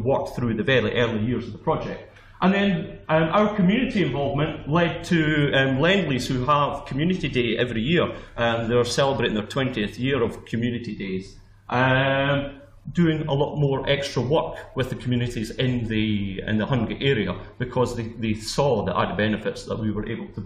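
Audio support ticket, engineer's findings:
Gave the whole clip a careful listen and found nothing wrong with the sound.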